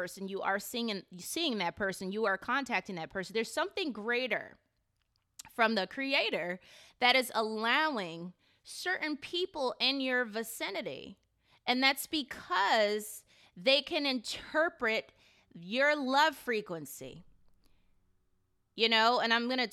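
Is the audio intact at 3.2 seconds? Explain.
No. A channel delay with comb filtering runs from 0.35 s to the end. One channel lags the other by about a single sample before the two are summed to mono. Cancellation starts near 20 kHz, so the top end sounds dulled.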